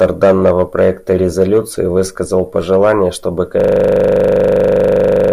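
At 3.60 s the speech breaks into a system hang loop that runs to the end of the clip. The machine or its audio driver stalled while the sound hardware kept replaying the same 40 ms of its ring buffer, so one fragment repeats 43 times at 25 Hz, heard as a rough, steady buzz. On a waveform the identical 40 ms cycle tiles exactly; a spectrogram shows fixed harmonic lines spaced 25 Hz apart.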